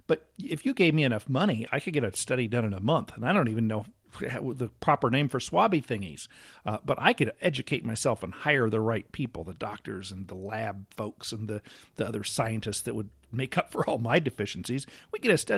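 No technical faults detected.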